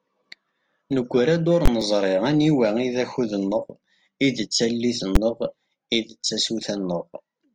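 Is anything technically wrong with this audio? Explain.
Yes, there are two kinds of problem in this speech clip, and one of them shows up twice.

The invalid numbers at full scale fault hits from 1.66 to 1.68 s and again at 5.15 s. Some calculation produced infinite or invalid values, and they got clamped to the maximum sample value. The first block lasts 20 ms, so you hear a hard pop going in and another coming out with nothing in between. The second block is only 10 ms, so it collapses into a single loud bang.

Right after that, at 1.81 s, just before "aniwa i d", there's a small jump in the speech. That's most likely a dropped buffer (overrun), where the program didn't collect its samples before the hardware overwrote them. Roughly 10 ms of audio went missing, and the two sides were joined directly with no gap. The sound skips ahead slightly instead of pausing.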